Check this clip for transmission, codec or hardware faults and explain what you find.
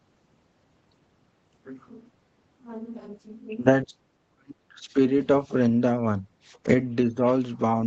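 One fault appears twice: speech suppressed in double talk. From 3.84 to 4.98 s the speech drops sharply, by around 40 dB, for about a second. From 7.07 to 7.25 s a brief dip of about 10 dB follows. The likely cause is an echo canceller that mistook the talker for loudspeaker echo while both sides spoke at once, and turned the talker down too.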